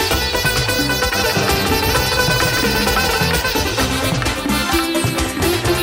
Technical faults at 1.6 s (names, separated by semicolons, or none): doubled audio track